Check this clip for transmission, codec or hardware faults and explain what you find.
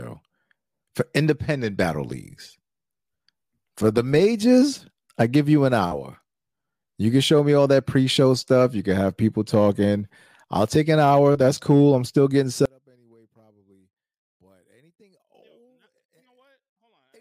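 One fault is present. From 12.66 s, just after "cool I'm still getting", to the end at 17.21 s, the speech drops by about 38 dB to a faint remnant. The likely cause is one channel inverted: with one side's polarity reversed, the shared centre signal cancels when summed to mono. The waveform's amplitude collapses abruptly, and the spectrogram turns nearly blank with only weak traces.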